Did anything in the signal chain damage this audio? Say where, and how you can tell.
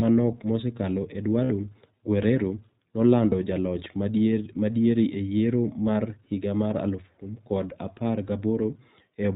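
Yes. Throughout, the speech is band-limited with nothing above 4 kHz, and it has a slightly rough, synthetic edge that is plainly audible. This is codec-stage damage from the iLBC codec, a narrowband VoIP coder. It models each short frame's excitation independently and at a low rate, so fine detail in the waveform is lost. The texture points to the 15.2 kbps mode with 20 ms frames.

There are also lost iLBC frames, a network-stage fault. Just after "manok mosekalo", from 1.44 to 1.52 s, the speech turns into a held, faintly buzzy vowel for about 60 ms, which fits three dropped 20 ms frames. A shorter 20 ms hold of the same kind occurs at 3.30 to 3.34 s. In each case the decoder concealed the missing packets by repeating the last pitch cycle mixed with noise. Because each frame decodes on its own, the voice is right again almost at once after each gap.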